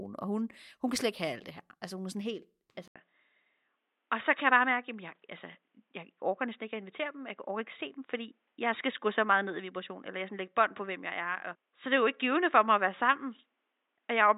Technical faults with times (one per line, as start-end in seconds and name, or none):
2.88-14.37 input switched to a poorer device